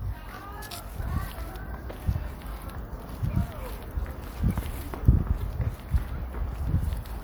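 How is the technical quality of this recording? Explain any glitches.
The recording has two technical faults, one at the very start and one brief glitch later on.

From 0.0 to 1.0 s there is channel delay (comb filtering). One channel arrives roughly 20 ms behind the other, and when the two are combined to mono, content common to both cancels at evenly spaced frequencies starting around 30 Hz. The result is a rough, slightly doubled sound that clears after the first second.

At 5.41 s a corrupt frame is decoded. A single compressed frame carried damaged data, and the decoder played it anyway, putting energy at the wrong frequencies for that frame's short duration. It is heard as a quick blip or chirp, peaking at roughly -30 dBFS.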